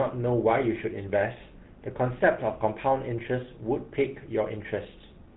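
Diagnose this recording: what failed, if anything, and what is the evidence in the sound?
The codec stage failed: GSM full-rate coding runs through the whole speech clip, with a plainly audible buzzy, gravelly roughness and nothing above 4 kHz, which fits a 13 kbps GSM full-rate encoder. Its pulse-driven excitation keeps only every third sample. A spectrogram shows a hard ceiling at 4 kHz and coarse, smeared harmonics.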